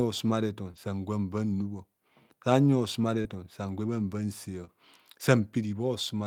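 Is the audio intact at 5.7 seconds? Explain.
Yes, at 5.7 seconds the speech plays through cleanly, with no dropout, click, distortion or other fault to be heard at that point.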